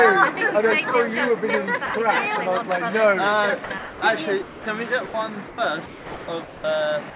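At 1.86 to 1.94 s the sound gives way to a short patch of steady noise or near silence. This is sound dropped by the voice detector. The sender's detector likely judged this stretch to be background and stopped sending, and the receiver filled the gap with comfort noise. The same thing happens at 4.42 to 4.66 s, 5.06 to 5.14 s, 5.48 to 5.58 s, and at the very end from 7.10 s. Each is a single hand-off from real sound to a smooth synthetic bed, with real sound returning afterwards except at the end, where the clip finishes inside the fill.

From 3.64 to 4.02 s, and again across the longer stretch from 5.86 to 6.64 s, the pattern is different. This is sound chopped by the voice detector. The detector likely flipped between sending and not sending more than once. Pieces of the sound vanish, leaving two or more holes. That repeated switching, rather than one gap, is what tells it apart from the dropped cases.

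All of this sits on a narrowband call path with nothing above 4 kHz, which fits 64 kbps G.711 mu-law.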